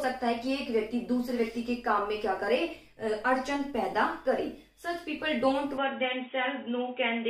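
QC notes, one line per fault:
5.78–7.30 s, input switched to a poorer device: the sound turns dull and boxy with nothing above 3.8 kHz, no gap at the change and no clear level jump, and new background noise arrives, well below the signal. That fresh noise floor, absent from a plain bandwidth cut, points to a likely change of microphone.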